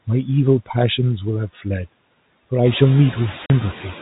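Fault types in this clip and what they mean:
Noise suppressor artifacts: The suppressor tracks what it judges to be steady background and pulls those bands down frame by frame, here by about 20 dB. You can hear the noise floor dropping away in the gaps and coming back up under the speech. It runs through the whole clip, and it's easier to notice once the room noise gets louder around 2.5 s.
Speech cut by the noise suppressor: At about 1.53 to 1.66 s the suppressor mistakes part of the speech for noise and turns it down with the background, by as much as about 14 dB. Roughly a tenth of a second of speech goes faint and a bit swallowed, the way soft consonants or a tail-off lose their edge when the gain drops under them.
Packet loss filled with silence: From 3.46 to 3.50 s there's a 40 ms hole of dead silence where audio never arrived and the receiver inserted nothing in its place. At that length it fits two 20 ms packets going missing together. 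The cut is abrupt at both ends rather than a smooth fade.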